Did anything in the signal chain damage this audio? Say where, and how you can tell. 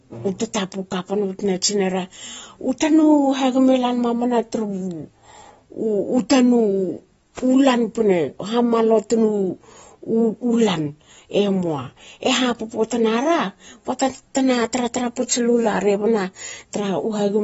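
Yes, at the codec stage, for the whole speech clip. Nothing reaches above 7.7 kHz, so sibilants sound dull and smeared, and sustained vowels carry an audible warble. This is likely AAC compression, with damage consistent with a low bitrate around 24 kbps. The encoder drops the top band and starves the remaining bands of bits. On a spectrogram, energy stops at a flat ceiling near 7.7 kHz, with blocky holes and patchy noise-like fill beneath it.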